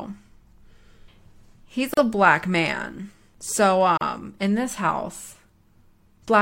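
At 1.94 s the speech drops out for about 35 ms, just before "a black man". At 3.97 s it happens again, for about 38 ms, just before "in this house". Both are a gap at a join of encoded pieces. The audio was coded in 2-second sections and joined untrimmed, so encoder delay and end padding left silence at each seam. The edges are smeared by the codec. Speech then resumes where it stopped.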